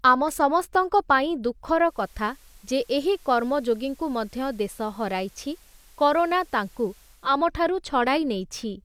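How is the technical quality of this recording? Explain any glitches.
The recording has one clear glitch, a stretch of weaker broadcast quality in the middle of the speech. From 1.70 s to 7.43 s, just after "ଆମ ସମସ୍ତଙ୍କ ପାଇଁ", there is digital radio blending to analogue. The receiver lost the digital stream and cross-faded to the station's FM signal over 381 ms, then faded back. During the FM stretch, a faint hiss appears, roughly 30 dB below the speech. The level drops by about 1 dB.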